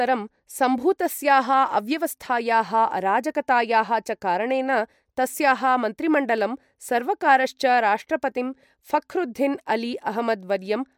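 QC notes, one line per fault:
Nothing stood out on listening to this speech recording, so there is nothing to log.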